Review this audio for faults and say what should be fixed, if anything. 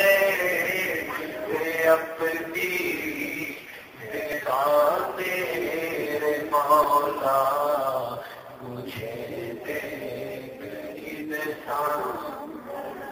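Repeated buffer at 4.32 s and 6.84 s: new audio arrived late, so the device replayed its last 2.9 ms block, consistent with a 128-sample buffer, heard as brief clicks. A larger buffer or more processing headroom would prevent these underruns.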